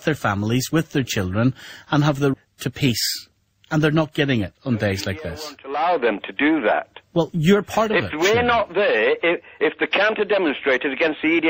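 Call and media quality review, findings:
Skip ahead at 2.33–2.35 s: a roughly 0.4 s stretch of audio is gone, and the two sides join almost directly with no silence or concealment fill. The jitter buffer or transport discarded audio while later audio was queued. A dropout would leave a gap or fill instead.

Jitter buffer speed-up at 2.45–2.87 s (107 %) and 3.32–4.03 s (109 %): the audio runs hurried but keeps its pitch. The receiver repeatedly trimmed pitch-period slices to shed excess buffered delay, about 40 ms and 70 ms respectively. Unlike a pitch or sample-rate error, the pitch does not rise.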